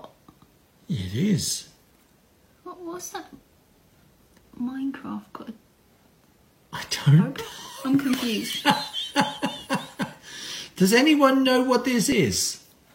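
Overlap between stream segments at 12.12–12.16 s: overlapping segment timestamps meant 33 ms of genuine sound was cut, so the waveform jumps.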